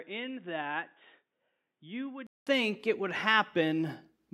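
From 0.0 to 2.47 s the sound is dull and boxy, with nothing above 3.8 kHz, and around 10 dB quieter, over a faint new noise floor. This is most likely an input switched to a poorer device, a narrower-band microphone, before the system returns to the fuller one. A spectrogram shows a hard ceiling at 3.8 kHz that lifts after a 200 ms gap at the switch. In the waveform, the envelope steps up in level.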